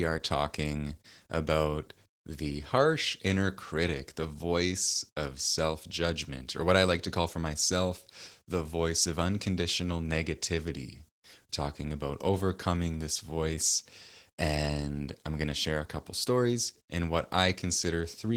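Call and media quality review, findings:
Opus voice compression, throughout: hoarse, slightly robotic speech, coarse top despite content up to 20.3 kHz. Excitation starvation rather than low-pass, which fits hybrid coding at about 16 kbps.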